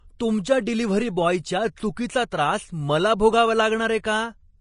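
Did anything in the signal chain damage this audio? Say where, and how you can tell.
Yes, at the codec stage. Throughout the speech there is nothing above 10.5 kHz, and the remaining treble sounds hissy and grainy, with roughened tones and blurred attacks. This is likely Vorbis compression at a low rate, fitting roughly 32 kbps, where coarse treble quantisation replaces fine detail with noise.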